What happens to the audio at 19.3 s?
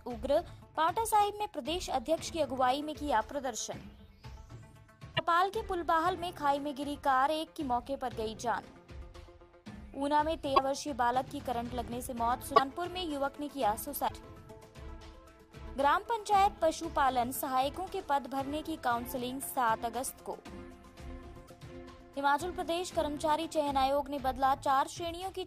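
Nothing goes wrong at 19.3 s; the audio plays through that moment intact, with no dropout, click, glitch or other audible fault.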